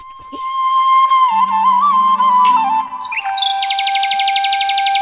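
At 2.88 s, lasting to about 2.91 s, there is a short concealed packet loss: roughly 20 ms of audio arrived too late for the decoder, and the receiver extrapolated the preceding sound to patch the gap before crossfading back. It registers as a brief smear or wobble. The band stops at 4 kHz, which fits a G.711 call path.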